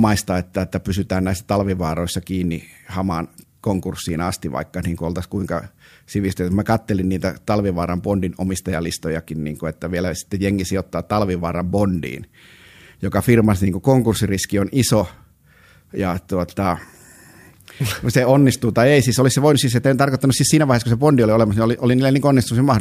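No technical faults can be heard anywhere in the recording.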